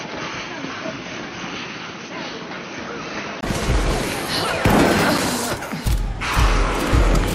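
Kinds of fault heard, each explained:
Input switched to a poorer device: from the start to 3.43 s the sound is dull, with nothing above 6.3 kHz, and slightly quieter, likely from a narrower-band microphone, ending in a 20 ms silence.
Block of digital silence: at 5.18 s the sound drops abruptly to silence for 5.33 ms, fitting a 256-sample block left unfilled, heard as a tick.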